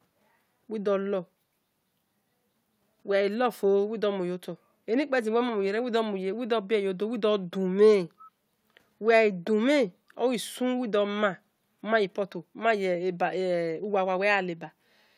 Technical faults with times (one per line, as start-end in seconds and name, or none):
8.18-8.30 echo leak